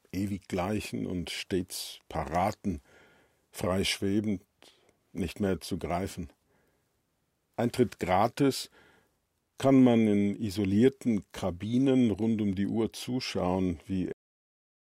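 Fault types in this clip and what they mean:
Cut-off end: the sound just stops dead at about 14.12 s, right in the middle of whatever was playing, with no fade or natural decay at all. What happened is that the final stretch of audio never got written out or played, so instead of ringing down, everything drops straight to digital silence. That flat, empty silence then runs for roughly the last 0.8 s of the clip, which makes the ending feel abruptly chopped off.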